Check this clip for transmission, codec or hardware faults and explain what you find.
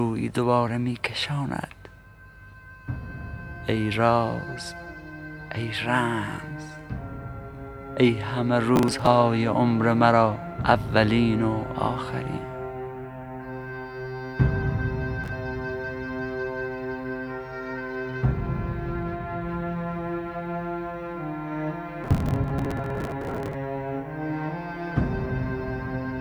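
Three bursts of processor overload crackle, at 8.76 to 9.07 s, 15.24 to 15.32 s and 22.04 to 23.54 s. The processor missed one short buffer deadline after another, and each missed slice was skipped, leaving hard-edged gaps. The grit has a regular grain that suggests buffers of around 10 ms. Unlike network packet loss, which leaves isolated gaps, this is a dense tearing that lasts only while the load does, longest in the final burst.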